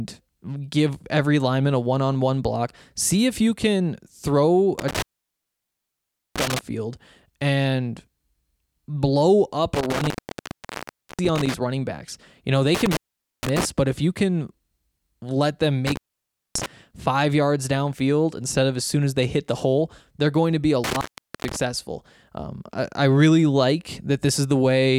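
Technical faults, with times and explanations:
4.79–6.59, 9.75–11.54 (after "blow up", before "running backs"), 12.75–13.65, 15.87–16.66 (after "let them") and 20.84–21.56 s (after "going to be a"), intermittent contact: the speech drops out for about 0.43 to 1.33 s each time, with crackle at both edges and faint hiss in the gap, as a loose cable or plug briefly opens the signal path.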